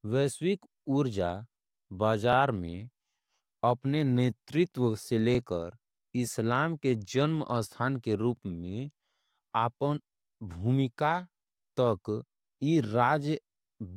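At 2.33 to 2.35 s, 5.35 to 5.37 s and 8.37 to 8.39 s, the speech stutters briefly. These are overlapping chunks. Each 3.0 s block begins before the previous one ends, so 21.33 ms replays at every join. It sounds like a regular click.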